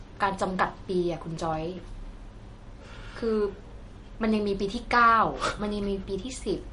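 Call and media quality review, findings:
MP3 compression, throughout: speech cut off above 10.6 kHz, watery swirl as weak spectral lines toggle between frames. Likely a low-bitrate MP3 encode, consistent with about 40 kbps.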